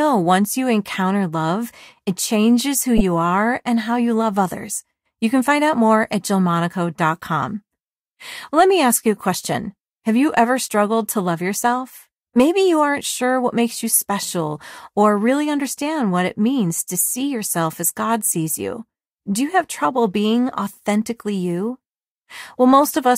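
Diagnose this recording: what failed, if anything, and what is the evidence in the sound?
The codec stage failed: a corrupt frame was decoded. Between "love it changes who" and "are and how you", from 2.97 to 3.01 s, a harsh 40 ms blip cuts through the speech. That length fits a single damaged frame. Flipped bits made the decoder misread gains and spectral codes, so it placed loud energy at the wrong frequencies for that frame. A lost packet would instead be concealed as a soft gap or a smeared repeat, not a loud foreign burst.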